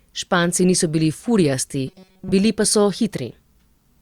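Robotic sound from repeated short buffers runs from 1.87 to 2.32 s. The speech turns into a rigid, metallic buzz at 188 Hz that still loosely tracks the words, likely because a roughly 5.3 ms chunk kept repeating while fresh audio, most of that stretch, was skipped.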